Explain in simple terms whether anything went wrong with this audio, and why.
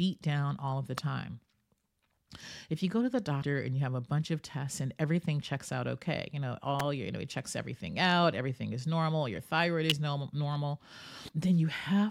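Sharp snaps cut into the speech at 0.98, 6.80 and 9.90 seconds, each lasting between about two and eighteen thousandths of a second. These are most likely an electrical switching spike: a nearby switch, motor or static discharge arcing briefly and the audio wiring picking up that jolt.

Two short disruptions appear from 3.38 to 3.44 seconds and from 11.25 to 11.32 seconds. This is damaged data in a compressed stream. Part of the file was corrupted, so the decoder misread those moments and had to find its place again, producing a brief garbled blip.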